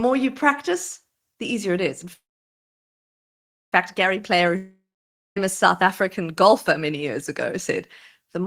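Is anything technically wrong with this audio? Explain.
Yes. The speech has two faults. Both are likely network problems.

At 2.13 to 3.74 s, after "easier it is in", there is a call audio freeze. The last sound fades into about 1.5 s of silence. Speech then resumes where it stopped, about 1.6 s late. This is likely delayed packets emptying the jitter buffer.

At 4.56 to 5.38 s, before "south african golfer many", there is a long network dropout. The sound fades to silence for about half a second. Speech returns with roughly 0.8 s missing.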